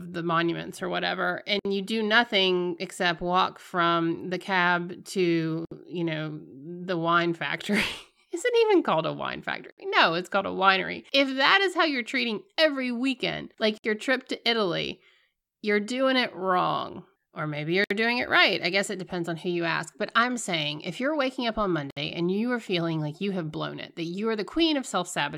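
Short holes of silence cut into the speech at regular four-second intervals, at 1.59, 5.65, 9.71, 13.78, 17.84 and 21.90 s. Each lasts about 60 ms (the first 58 ms, the rest 64 ms). The sound stops abruptly, with smeared edges, then resumes exactly where it left off. This is a gap at a join of encoded pieces. Each piece was encoded separately, and the encoder's start-up delay and final-frame padding were left in when the pieces were joined.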